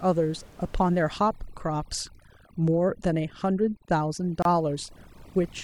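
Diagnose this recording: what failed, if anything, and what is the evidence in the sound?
Call processing: overdone noise removal from 1.12 s to the end. The room noise, about 26 dB below speech, is gated into twinkling specks, and quiet speech bands vanish.

Codec: a gap at a join of encoded pieces, a 28 ms gap from 4.42 s to 4.45 s with smeared edges. It comes from untrimmed encoder start delay and final-frame padding.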